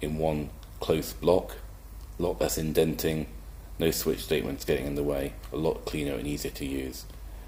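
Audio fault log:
No faults were found in this clip. Nothing in the audio calls for a timed entry in this log.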